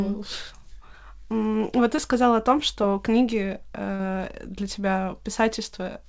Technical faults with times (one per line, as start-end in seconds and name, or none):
1.96-1.99 short concealed packet loss
3.95-4.01 short concealed packet loss